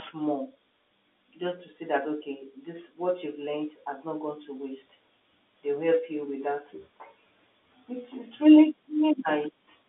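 There are no technical faults in this speech to describe in time order; the narrow telephone band is the line working as it should.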